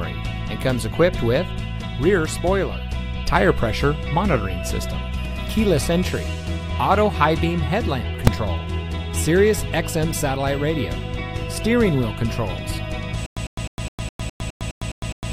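At 8.27 s invalid numbers at full scale produce one loud bang, a 2.9 ms block (fitting a 128-sample block) pinned at one extreme value, seen as a solid flat slab beyond the audio's peaks and a full-height broadband line. From 13.26 s to the end, a stutter with silent gaps repeats a roughly 0.1 s burst ten times, with about 106 ms of digital silence between bursts and a 207 ms period. The waveform shows evenly spaced identical blocks separated by flat silent stretches, and the spectrogram shows matching blank columns. The likely cause is a stalled stream that replays its last fragment on each retry.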